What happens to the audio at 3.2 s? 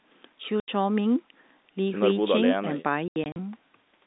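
Between 3.08 and 3.36 s the speech hits packet loss filled with silence: about 140 ms goes missing across that 280 ms stretch, the longest hole 80 ms, in chunks that fit 20 ms packets. Unlike concealed loss, nothing is smeared or repeated; the gaps are dead silent with hard edges.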